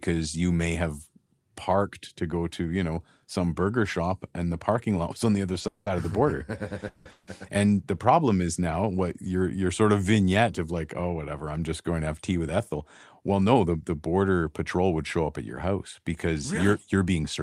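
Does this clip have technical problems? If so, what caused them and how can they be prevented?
Yes. A call audio freeze occurs three times: at 5.67–5.89 s, after "was on the other" and before "of the border"; at 6.88–7.08 s; and at 7.11–7.30 s. Each time the sound is stretched into a fading buzz for about 160–190 ms, likely because held-up packets drained the jitter buffer. Nothing is lost; the audio resumes later. A larger adaptive jitter buffer or a more stable network path would prevent this.

A jitter buffer speed-up runs from 13.22 to 13.78 s, just before "the border patrol would". The receiver trimmed pitch-period slices totalling roughly 70 ms, so that stretch plays at about 110% speed at unchanged pitch and sounds hurried. Smoother packet delivery, or gentler buffer-shrinking spread over a longer time, would prevent it.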